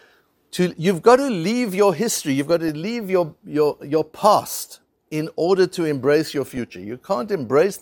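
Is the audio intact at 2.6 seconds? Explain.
No. DAB burbling runs from 2.51 to 2.69 s, between "leave your history you've" and "leave your your your". Uncorrected bit errors corrupt MP2 audio data, so short blips of noise appear in single sub-bands, consistent with 13 damaged frames.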